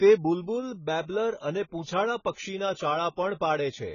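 Speech, with heavy AAC compression damage across the whole clip. Nothing is heard above about 7 kHz, so the sound is dull and muffled. Sibilants turn fizzy and smeared. Sustained sounds warble. The encoder has dropped the top of the spectrum and left gaps in what remains. It is likely an AAC-LC encode at a very low bitrate. The damage fits something near 16 kbps.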